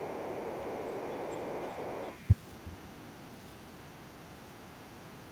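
Other side's voice leaking through runs from 0.0 to 2.34 s. A second voice sits well below the main talker, roughly 25 dB down. It was likely played on the talker's loudspeaker and left behind by an echo canceller that did not remove it fully from the microphone.

Speech suppressed in double talk follows from 1.63 to 1.69 s, a brief, shallow dip of only a few decibels in the talker's level. It was likely the echo canceller hearing both sides at once and turning the whole signal down. A much deeper instance comes from 2.62 to 3.03 s, where the talker's speech drops by roughly 30 dB for about 400 ms and nearly vanishes. The likely cause is the same double-talk mistake.

Other side's voice leaking through returns more faintly, around 40 dB down, from 2.98 to 3.28 s, in a short scrap at 4.31 to 4.35 s, and again from 4.55 to 5.11 s. These are remnants of the far end, likely left by incomplete echo cancellation.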